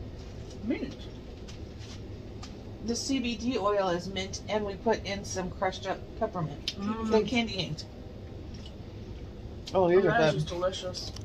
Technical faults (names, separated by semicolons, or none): none